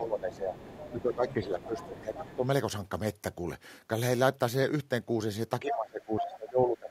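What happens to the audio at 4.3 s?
Nothing goes wrong at 4.3 s: the speech carries straight through that moment with no dropout, click or distortion.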